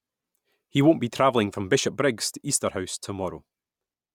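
A speech recording, and nothing is technically wrong with it.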